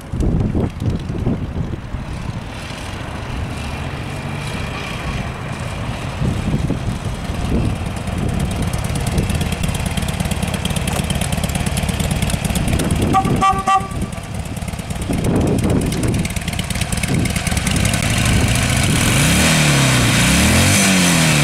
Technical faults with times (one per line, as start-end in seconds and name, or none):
6.55 underrun with held sample
9.62 underrun with held sample
18.01 underrun with held sample